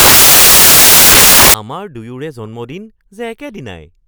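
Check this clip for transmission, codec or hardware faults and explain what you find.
One fault is present at the start. From 0.0 to 1.54 s, samples built from the wrong bytes: misassembled sample bytes promote low bits into loud white noise, unlike steady added hiss beneath intact speech.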